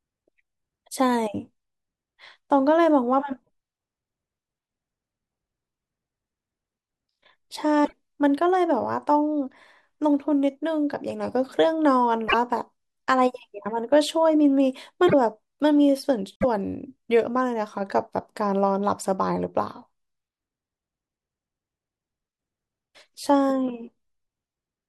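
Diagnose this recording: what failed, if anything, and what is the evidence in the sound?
The speech jumps ahead at 3.42–3.48 s, 7.84–7.93 s, 12.28–12.34 s, 15.06–15.14 s and 16.36–16.45 s, each time with a brief chirp, noise burst or short gap lasting about 54 to 88 ms, or two to four frames of about 24 ms. This is codec-stage damage, likely a broken MP3 bit reservoir. After missing frames, the decoder reads borrowed bits from the wrong frame. On a spectrogram, each spot shows a smeared or empty vertical band, and the waveform shows a discontinuity.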